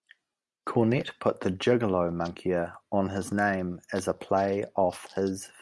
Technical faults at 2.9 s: none

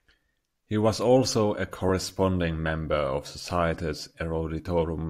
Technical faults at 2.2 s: none

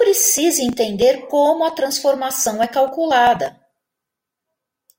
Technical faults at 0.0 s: none

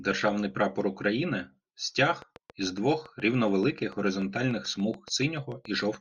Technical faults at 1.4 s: none

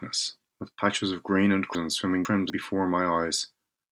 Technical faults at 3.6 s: none

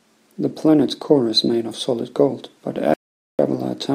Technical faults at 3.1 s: audio dropout to silence

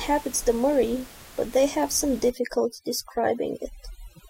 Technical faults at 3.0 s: overdone noise removal

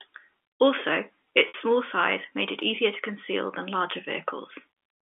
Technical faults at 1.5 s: packet loss with pitch repetition

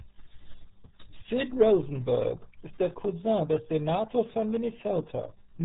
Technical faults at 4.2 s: RealAudio 14.4 codec

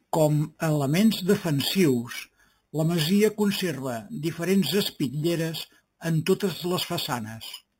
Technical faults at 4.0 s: imaging from sample-and-hold upsampling

